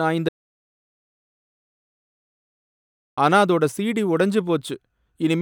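Audio dropout to silence from 0.29 to 3.18 s: the speech cuts out for about 2.9 s into dead digital silence, likely from lost input while recording continued.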